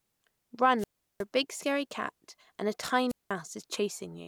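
At 0.78 s the speech breaks up in a wireless microphone squelch dropout. The radio signal fades, hiss rises, then the receiver mutes for about 0.37 s. Speech resumes at 1.24 s. The same happens from 3.08 to 3.32 s, with a 0.19 s hole.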